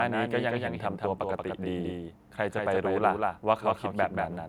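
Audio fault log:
throughout: doubled audio track. The speech has likely been picked up a second time through a slower path and mixed back in, so a full-band copy trails the original by about a fifth of a second at roughly 5 dB lower. Because the copy is whole and unfiltered, with no decay or room colour, every syllable lands twice as a distinct, dry slap rather than a reverberant tail.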